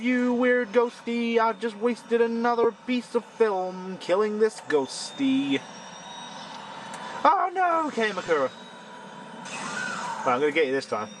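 Brief noisy smears at 2.64 s and from 8.26 to 8.28 s are lost LE Audio frames: the decoder filled 7.5 ms and 15 ms gaps by replaying the last spectrum with random signs.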